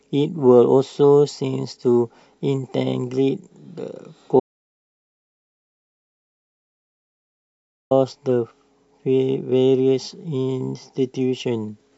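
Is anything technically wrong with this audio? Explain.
Yes. An audio dropout to silence runs from 4.40 to 7.91 s, about 3.5 s of speech lost. The input was likely cut off, so silence was written instead: the speech stops mid-flow, the gap holds dead silence with no room tone, and it resumes abruptly.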